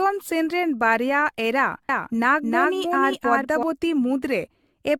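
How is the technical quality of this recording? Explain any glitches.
Technical quality is poor, with lossy coding damage throughout and a stretch of doubled speech in the middle.

Generation loss runs the full length. The speech sounds swirly, hollow and smeared, with blurred consonant attacks and nothing above 17 kHz. That is more damage than a single 96 kbit/s AAC-LC encode would leave. The likely cause is around ten successive decode and re-encode passes, each quantising on a shifted frame grid so the noise and spectral holes accumulate.

A doubled audio track runs from 1.89 s to 3.63 s, starting right after "ᱥᱮᱱ ᱨᱮᱱ ᱵᱟᱨᱭᱟ ᱮᱨᱟ". A second full-band copy of the speech trails by about 0.3 s at roughly equal level, with no decay or room colour. It switches on and off abruptly, which points to a likely duplicated capture path or misaligned edit.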